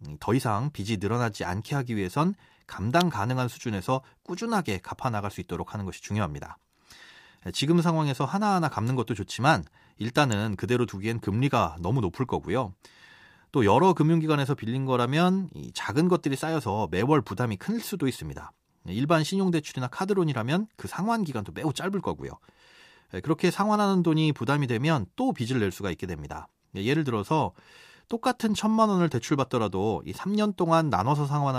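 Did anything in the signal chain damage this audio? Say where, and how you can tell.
Yes. Electrical switching spikes at 3.01 and 10.32 s, in the analogue wiring: sharp snaps over the speech near -10 and -15 dBFS, likely a nearby switch arcing into the line.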